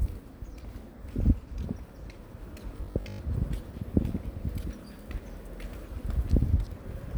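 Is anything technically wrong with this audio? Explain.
Yes, there's a robotic sound from repeated short buffers between about 2.77 and 3.19 s. For that stretch the sound turns into a stiff, metallic buzz pitched around 50 Hz. The likely cause is audio arriving too slowly, so playback keeps looping the last 20 ms chunk while fresh material gets dropped, with roughly half of what you hear there being repeats. Looping every 20 ms stamps that fixed 50 Hz on top, so the sound only loosely tracks what it should be.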